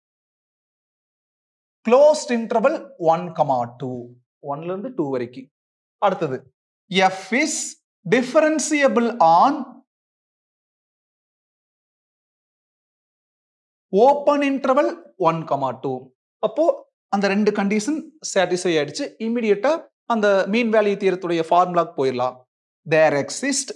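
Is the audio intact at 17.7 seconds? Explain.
Yes, at 17.7 seconds the audio is intact, with no dropout, click, distortion or other fault in the sound at that point.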